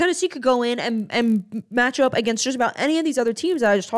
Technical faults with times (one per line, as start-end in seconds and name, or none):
0.00-3.98 resampler restarted on every block